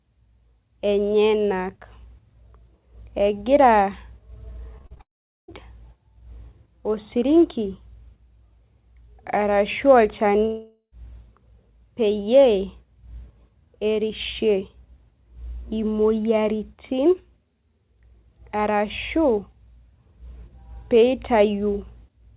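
From 4.78 to 5.01 s there is repeated packet loss with a robotic sound: five short holes, the longest about 38 ms, each patched by stretching the last bit of audio. Nearly half of that quarter-second is this synthetic fill, so the sound turns choppy. Real audio still gets through between the holes, which is what separates this from a dropout.

At 5.01 s it runs straight into one continuous gap lasting until 5.5 s, likely a long network dropout. After a brief smeared tail it goes almost entirely silent for roughly 0.44 s, and the sound resumes with that stretch simply gone. A second gap from 10.45 to 10.94 s sounds different. Only about 60 ms of it is silent, so most of the hole is a fading buzz continued from the last sound rather than a clean cut. Throughout, the narrowband call path leaves nothing above 4 kHz, which fits G.711 telephone coding.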